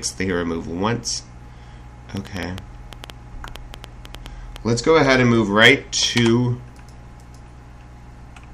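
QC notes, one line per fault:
2.17–5.15 s, train of clicks: a run of about twenty sharp, similar-sounding ticks cuts across the sound at an uneven pace, averaging about 5.7 per second and standing out at roughly 10 dB above the surrounding signal, so they pop clearly through quiet moments as well as louder passages. Because each click has nearly the same shape, the source is likely an external pulse, such as electrical interference or a faulty connection or power supply, rather than anything in the recorded sound itself.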